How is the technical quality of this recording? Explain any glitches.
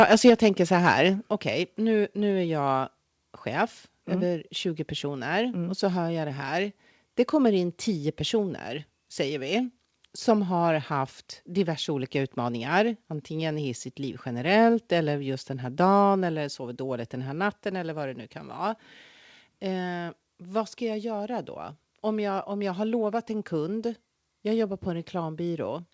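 The recording has two short problems near the start: the microphone overloads twice and its level drops once in between. It was carried over a call link, which shows in the lack of any content above 8 kHz, consistent with a wideband call codec such as G.722.

Microphone overload, 0.0 to 0.3 s and again 0.87 to 0.91 s: the loudest peaks are flattened, likely because the input level ran about 4 dB and then about 3 dB past the converter's limit, clipping a few percent of samples in the first burst. The result is a harsh, crackly edge on the peaks. Codec noise sounds different: it is a steady fuzz spread across the whole signal, while this crackle appears only on the loudest moments.

Microphone volume stepped down, at 0.3 s: right after the first overload, the speech and the background both drop by about 4 dB at once. This is likely the call software cutting the device's input gain in reaction to the clipping. 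A person moving away from the microphone would lower the speech gradually and leave the background level unchanged, so the single step affecting both points to a gain change. The cut was not enough, and the overload returns at 0.87 s.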